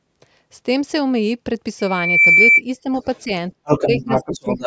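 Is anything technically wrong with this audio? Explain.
Yes, there are three problems.

From 1.79 to 2.61 s, a loudspeaker feedback squeal appears: a single 2.3 kHz tone swells over a few tenths of a second until it is about 10 dB louder than the speech, then stops. The microphone is picking up the loudspeaker it feeds. At 2.3 kHz the gain around that loop exceeds one, so the tone keeps reinforcing itself until the loop is broken.

A second, unrelated voice can be heard behind the talker. From 2.97 to 3.21 s it is a faint scrap, about 40 dB down. From 3.65 s to the end it becomes a sustained presence only about 5 dB below the main speech. This is likely the other side's voice leaking through: the far end plays from the talker's loudspeaker, and the echo canceller has failed to remove it from the microphone signal.

In the same stretch, the talker's own speech is repeatedly pushed down. 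The dips come at 3.25 to 3.30 s (a slight drop of about 5 dB), 3.56 to 3.68 s (a near cutout of about 40 dB), 3.89 to 4.11 s, and 4.28 s to the end (both about 15 dB, in short bites). This is likely speech suppressed in double talk. With both sides talking at once, the echo canceller cannot tell the local voice from the loudspeaker echo, so it attenuates both.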